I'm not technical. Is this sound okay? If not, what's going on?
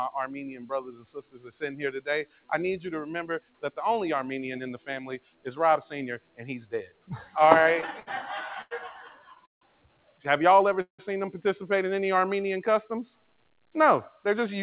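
No. A noise suppressor designed for speech stayed switched on throughout, treating steady sound as noise, so the audio keeps pumping and thinning as it turns things down.

Sound cut by the noise suppressor: it pushed down held and fading sounds at 0.84, 1.28, 2.25, 3.4, 5.18, 6.19, 6.86 and 9.0 to 10.2 seconds, so they sink or end abruptly.

Repeated stalls (stutter): from 7.46 to 8.73 seconds the data arrived late seven times, so the playback kept pausing and stretching, making the sound drag and stutter.

Call audio freeze: at 9.46 and 10.81 seconds the sound halts for a moment and drops to near silence, likely because the data was held up on the way, before carrying on where it stopped.

Jitter buffer slow-down: from 12.05 to 12.41 seconds the receiver repeated tiny slices to rebuild its reserve, so the audio plays about 10% slower at the same pitch.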